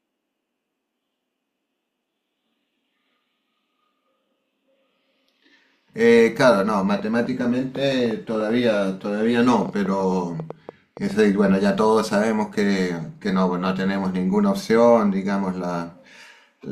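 From 6.99 to 11.12 s there's a train of clicks, around 5.8 a second at an uneven pace, maybe thirty in all, poking a few dB above the speech. Same-shaped pops tick right through the pauses too, likely interference from nearby gear or a faulty connection or power supply.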